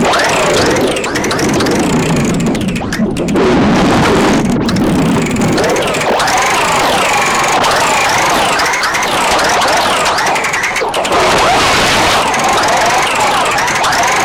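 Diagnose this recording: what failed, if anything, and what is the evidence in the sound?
A filter restarted on every block, in block-based processing, from 4.66 to 9.18 s. Each block starts from cleared filter state, leaving a 50 Hz buzz that follows the sound's level, which fits 20 ms blocks. The waveform shows evenly spaced ticks; the spectrogram shows 50 Hz harmonic lines.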